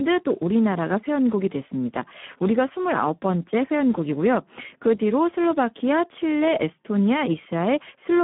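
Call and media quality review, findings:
Speex codec at a low quality setting, throughout: too few bits for the excitation, pointing to roughly 8 kbps. Speech hoarse, noisy. Band limited to about 150 Hz to 3.4 kHz, nothing above 3.8 kHz, so the speech sounds narrow and muffled.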